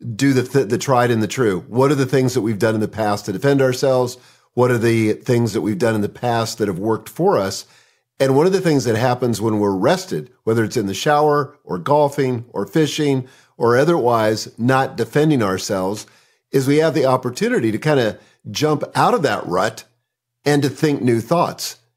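No technical faults can be heard anywhere in the speech recording. There is nothing to mark at any point along its timeline.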